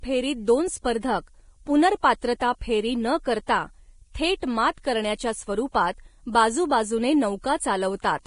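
From the first moment to the end, a switching supply whistle sits behind the speech: a thin, high tone wandering between about 12.6 and 13.1 kHz, roughly 30 dB below the speech. It comes from a switching power supply running in an audible burst mode or beating against another supply. Unlike a fixed electronic tone, its pitch drifts within that band rather than holding exactly still, and it stays in place whether or not anyone is talking.

Also present throughout is heavy codec damage of the kind Vorbis compression produces, likely from encoding at a low bitrate near 31 kbps. Nothing remains above about 10.6 kHz except that isolated whistle, and the upper speech band sounds grainy and hissy, with consonant attacks smeared and tonal parts roughened. This is what happens when the codec quantises the treble so coarsely that fine detail turns into noise. What separates it from the whistle is that the graininess is broadband and follows the speech, appearing with each syllable and falling away in the gaps, while the whistle is a single narrow line that never stops.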